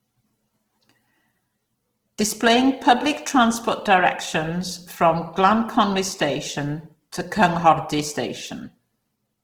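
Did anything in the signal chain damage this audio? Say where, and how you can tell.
Yes, at the codec stage. Throughout the speech the sound is grainy and rough, with a noisy fizz filling the upper bands instead of leaving gaps, while content still reaches 20.4 kHz. This is likely Opus compression in CELT mode, consistent with about 16 kbps, noise-filling starved bands.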